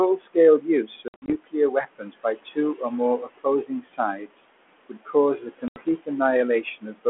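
Noise suppressor artifacts run through the whole clip. The suppressor pulls down about 21 dB of whatever it judges to be steady background, deciding band by band for each short frame. The room noise, which sits about 16 dB below the speech, drops away in the pauses and creeps back in under the talking.

Speech cut by the noise suppressor first appears from 0.17 to 4.43 s. Here the suppressor mistakes parts of the speech for noise and turns them down with the background, by as much as about 21 dB. Roughly a second and a half of that stretch is affected. Soft consonants and word tails sound swallowed. The same thing happens again from 4.89 to 6.09 s, with drops of about 18 dB over around half a second. It happens once more from 6.63 to 7.06 s, again about 18 dB deep but only briefly.

Packet loss on an ADPCM call strikes from 1.08 to 1.33 s. About 140 ms goes missing, scattered across 200 ms in runs of up to 60 ms, which fits roughly seven lost packets. 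A second hit comes from 5.68 to 5.83 s, taking 80 ms, about four packets' worth. Each gap is filled with hard-edged silence. Because the decoder's adaptive predictor and step size no longer match the sender's, the speech comes back slightly distorted, then settles within tens of milliseconds. The call runs over 32 kbit/s G.726, band-limited to about 250 Hz to 3.4 kHz.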